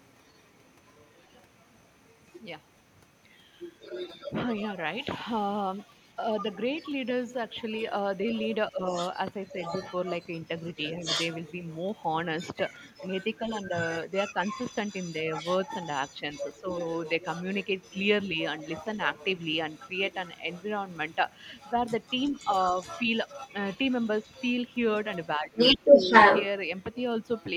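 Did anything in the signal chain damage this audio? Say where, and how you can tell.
Yes. The other side's voice leaks through at 0.0–2.43, 3.59–4.97, 5.79–12.02, 12.38–26.46 and 26.77–27.53 s, mostly about 10 dB under the talker. This is call processing, likely incomplete echo cancellation.

Speech is suppressed in double talk at 8.71–8.8 s and 25.36–26.1 s, dipping about 10 and 15 dB. The echo canceller likely ducked both voices together.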